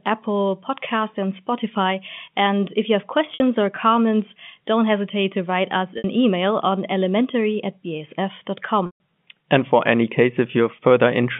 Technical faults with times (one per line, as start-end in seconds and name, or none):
3.34-3.40 packet loss with pitch repetition
5.98-6.04 packet loss with pitch repetition
8.86-9.00 packet loss with pitch repetition